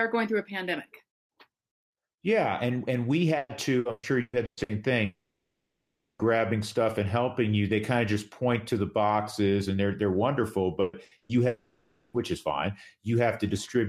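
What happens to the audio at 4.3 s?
At 4.3 s the speech is choppy, with pieces dropping out. This is repeated packet loss (robotic sound), running from 3.37 to 4.72 s. Six gaps occur in that stretch, the longest 120 ms. Each missing chunk is covered by stretching out the last audio that arrived, and about 44% of the span is filled this way, about 600 ms of patched sound.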